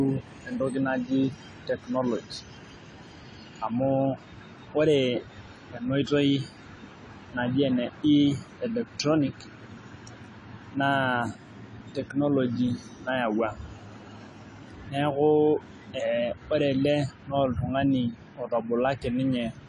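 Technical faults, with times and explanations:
Throughout, AAC compression: speech is dulled with nothing above 11.3 kHz, plus warbling fizz on sibilants that a plain low-pass lacks, likely AAC-LC near 32 kbps.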